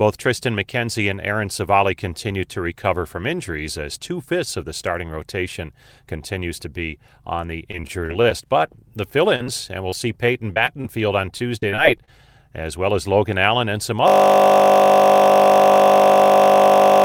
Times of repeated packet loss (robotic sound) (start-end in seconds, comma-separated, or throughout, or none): 7.71-8.33, 9.90-10.86, 11.38-12.09